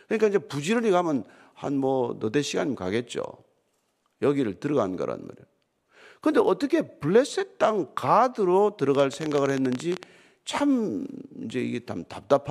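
From 8.95 to 10.04 s, a train of clicks: twenty-odd irregular ticks, 17.6 per second, likely interference, showing as waveform spikes and vertical spectrogram lines.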